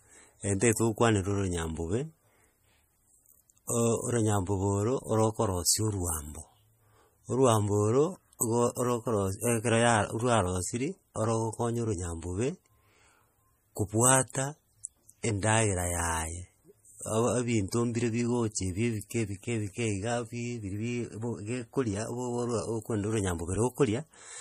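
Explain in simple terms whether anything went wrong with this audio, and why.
Yes. From start to finish the speech carries a watery, swirling edge, and s sounds come out plainly metallic and chirpy. Nothing is left above about 15.2 kHz, which points to MP3 compression, likely with too few bits: the encoder drops the top end and switches faint details on and off from moment to moment. A simple treble filter would only dull the sound; this flickering, bubbly texture is what separates compression from it.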